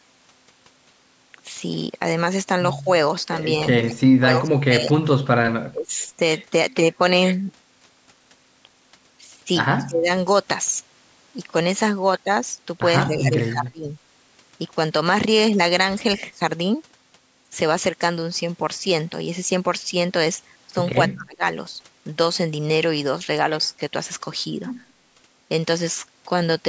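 Speech dips by up to about 30 dB at 3.86–5.06, 5.69–6.02, 9.87–10.09, 13.06–13.87 and 21.1–21.43 s, likely speech suppressed in double talk: with both ends talking, the canceller turned everything down. At 9.79–9.86 s a faint copy of the speech comes back 204 ms late, about 25 dB down, likely an echo leak from a loudspeaker end.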